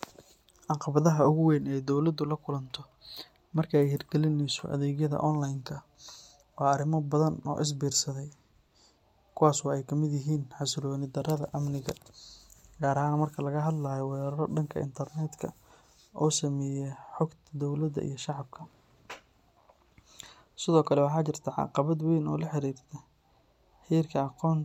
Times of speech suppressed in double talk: none

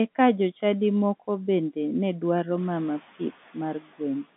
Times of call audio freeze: none

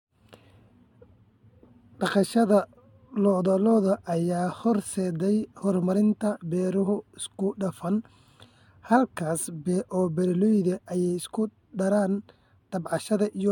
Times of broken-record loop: none

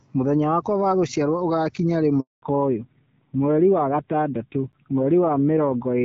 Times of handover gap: 2.20-2.42

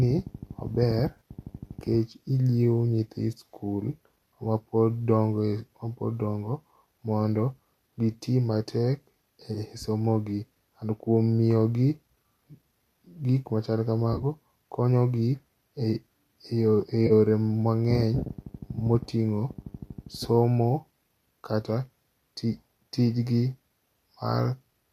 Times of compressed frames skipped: none

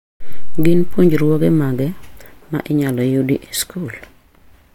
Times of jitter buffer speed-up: none

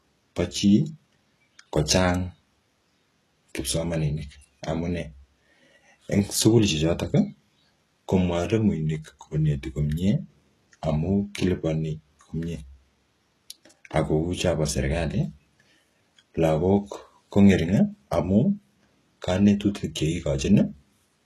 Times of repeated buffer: none

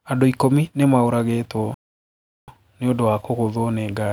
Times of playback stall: 1.74-2.48

